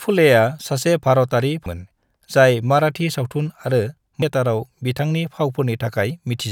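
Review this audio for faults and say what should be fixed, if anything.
Damaged data in the compressed stream causes two brief blips in the speech, at 1.66 s and 4.22 s. Corrupted bytes there make the decoder misread frames and lose sync until it finds the next header. Store and transmit the file with checksums or error detection.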